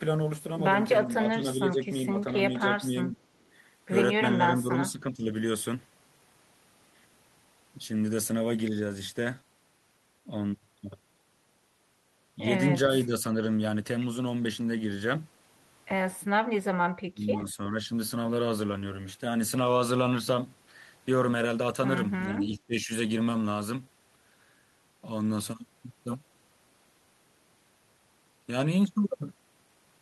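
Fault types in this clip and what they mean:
Speech suppressed in double talk: The speech dips in short patches, usually by about 10 dB and once nearer 20 dB. An echo canceller likely turned it down while both sides talked.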